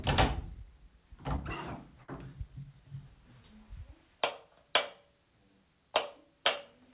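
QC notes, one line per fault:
1.36–1.39 s and 2.03–2.10 s, short concealed packet loss: about 20 ms and then 40 ms of audio arrived too late for the decoder, which extended the preceding sound to fill each gap before blending back. Each spot is a brief smear or wobble in the sound, heard within the narrowband call audio, which has nothing above 4 kHz.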